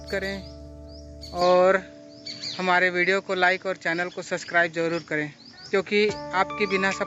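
From 1.41 s to the end, the sound abruptly narrows, losing everything above 7.6 kHz, with a small level shift and new background noise, likely an input switched to a poorer device rather than gradual filtering.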